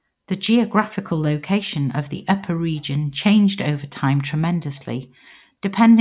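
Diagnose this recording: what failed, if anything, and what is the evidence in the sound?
Nothing in the signal points to a failure at any stage between capture and playback: the speech arrives continuous and at a steady level, with no audible disturbance anywhere along its path.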